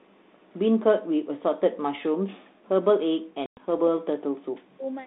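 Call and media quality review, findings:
Echo leak, 0.00–0.59 s: faint delayed copy of the speech, about 40 dB down, trailing by about 207 ms. Likely the far end's echo canceller letting loudspeaker pickup through.

Speech suppressed in double talk, 2.38–2.70 s, 2.99–4.21 s, 4.63–4.92 s: speech ducks hard, deepest dips around 40 dB. Likely echo canceller clamping both talkers during overlap.

Packet loss on an ADPCM call, 3.46–3.61 s: 110 ms hard-edged hole, then speech comes back slightly distorted, settling within tens of ms. Decoder's predictor and step size desynced after the gap. Audio is narrowband G.726, which suggests a 32 kbit/s line.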